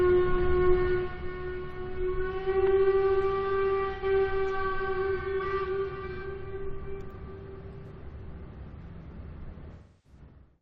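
A recording of general sounds with AAC frame loss with concealment in two places: the decoder lost frames and rebuilt the gaps from the last good spectrum. At 3.93 to 4.04 s, an 85 ms gap fitting about two frames becomes a brief smeared, noisy patch. At 9.73 to 10.19 s, a 299 ms loss decays toward silence and fades back in.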